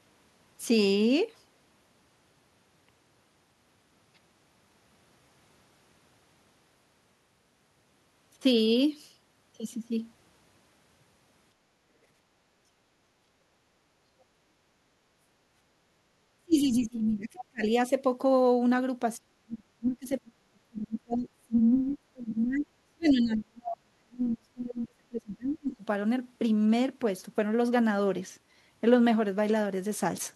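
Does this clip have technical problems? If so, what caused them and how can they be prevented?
Yes. The first problem is background gated by the echo canceller, at 12.72 to 13.4 s and again briefly at 15.02 to 15.13 s. The room tone sags by about 6 dB and then comes back. That happens because the canceller turns the microphone down while the far-end loudspeaker is playing, then releases it. You can prevent it by setting the canceller's residual suppression gentler or adding comfort noise so the background stays steady.

The second is speech suppressed in double talk, at 16.37 to 17.63 s and then across a long stretch from 19.18 to 25.83 s. The talker's level collapses very deeply, something like 35 dB at worst. This is likely the echo canceller failing to tell the near talker from loudspeaker echo while both sides speak, so it suppresses everything. Better double-talk detection, or headsets instead of open speakers, would prevent it.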